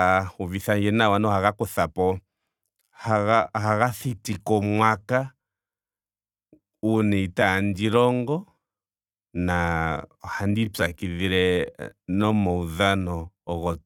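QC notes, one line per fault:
2.77–13.85 s, time-stretched section: speech abruptly slows to about 0.69× pace at unchanged pitch, sounding dragged, likely from pitch-preserving stretching that repeats short segments.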